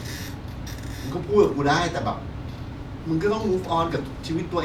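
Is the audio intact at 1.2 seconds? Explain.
Yes, at 1.2 seconds the speech plays through intact, with no dropout, click, distortion or other fault at that point.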